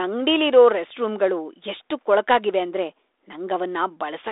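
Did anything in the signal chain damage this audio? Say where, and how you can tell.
No, nothing in the signal chain damaged this speech.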